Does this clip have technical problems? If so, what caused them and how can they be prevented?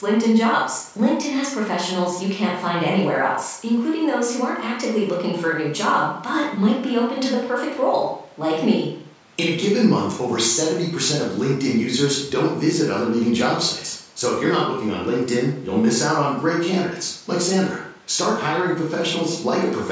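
No, the speech shows no technical faults; it has passed through normal call microphone processing, which removes the lowest bass and leaves nothing above 8 kHz, so there is nothing to prevent.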